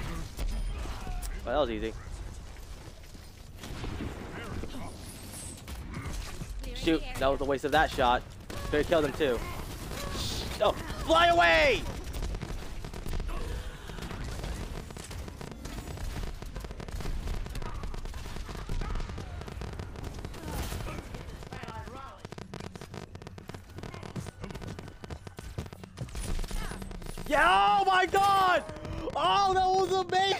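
From 8.50 s to 30.34 s the audio carries a train of clicks, about 13 per second at an irregular pace, some 300 in all, ticking over the sound and its pauses and peaking roughly 10 dB above it. A spectrogram shows thin vertical broadband lines and the waveform sharp spikes, likely from electrical interference or a faulty connection or power supply.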